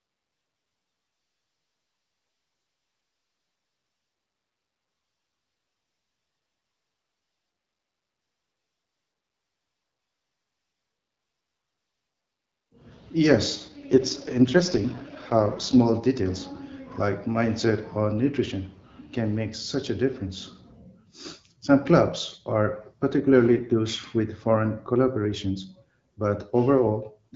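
From 1.13 to 3.55 s and 13.55 to 15.80 s, an AMR rate drop turns the speech raspy, fitting a 12.65 to 6.6 kbit/s fall. The spectrogram band stays unchanged, and the waveform has no gap.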